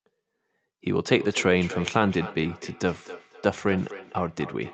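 From 1.07 s to the end, a feedback echo between two devices runs under the speech. A second device in the same room replays the call, and the first microphone picks it up again. Its echo canceller cannot remove sound it did not play. So the speech returns roughly every third of a second. The repeats peak about 14 dB below the speech. They sound thin and ringing, with the top end stopping near 8 kHz from the call codec.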